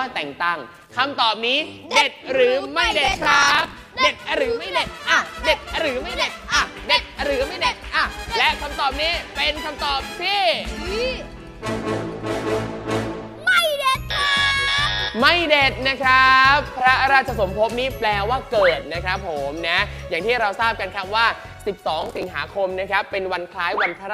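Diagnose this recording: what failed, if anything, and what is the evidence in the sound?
Processor overload crackle at the driver and buffer stage, from 3.06 to 3.74 s and 22.01 to 22.23 s. Hard-edged slices of old audio, each roughly 10 ms long, repeat through both bursts, giving a gritty tearing that stops once the load clears, unlike a loose connection's random pops.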